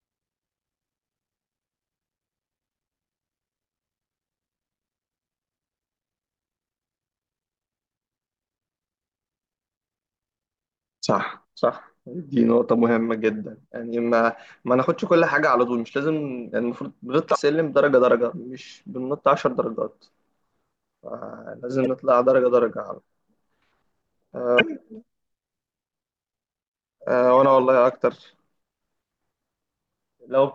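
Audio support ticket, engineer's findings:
Brief glitches in the speech at 17.32–17.36 s, 21.83–21.87 s, 24.57–24.61 s. Damaged data in the compressed stream; decoder misreads frames, loses sync, resyncs at the next header.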